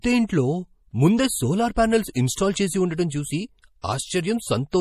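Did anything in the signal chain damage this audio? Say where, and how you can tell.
Yes, at the codec stage, throughout the clip. The speech has watery, swirling textures, metallic chirps on sibilants, and smeared attacks. Nothing is present above 15 kHz. That is MP3 compression damage, likely from an encoder starved of bits at a rate that fits about 40 kbps. When bits run short, it cuts the treble and drops weak frequency lines. On a spectrogram, the top edge is flat at 15 kHz, with flickering holes and isolated blobs below it.

There is also pre-echo from the same transform codec, at 1.75 s, from 2.13 to 2.15 s, at 3.09 s, and from 3.82 to 3.84 s. Before each sharp onset, a short hiss lasting roughly 11 to 25 ms leads in, and the attack itself sounds softened. The encoder spread quantisation noise, scaled for the loud transient, across the whole block, including the quiet moment before it. 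The waveform shows low-level fuzz just ahead of each attack, and the spectrogram shows a broadband smear starting early.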